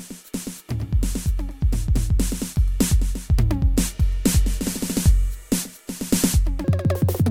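From 6.64 s to the end at 7.30 s, the music is read two samples at a time (double speed): the reader takes each pair of samples as a single frame. The final stretch runs twice as fast and a full octave higher.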